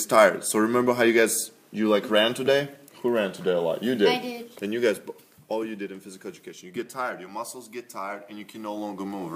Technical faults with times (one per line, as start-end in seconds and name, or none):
4.32-5.74 zipper noise